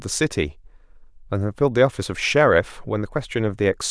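No technical faults occur anywhere in the speech recording, so there are none to describe in time order.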